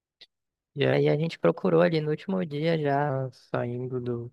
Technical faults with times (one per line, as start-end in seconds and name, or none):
0.93-3.10 section at the wrong speed